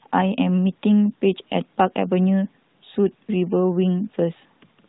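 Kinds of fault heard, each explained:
No faults can be heard in this speech clip.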